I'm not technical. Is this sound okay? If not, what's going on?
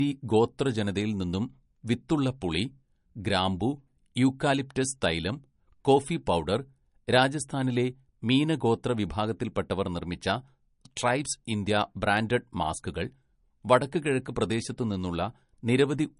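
No. The speech sounds dull throughout, with nothing above 10.6 kHz. This is likely low-bitrate audio saved at a high bitrate: a large file that still sounds like a small one.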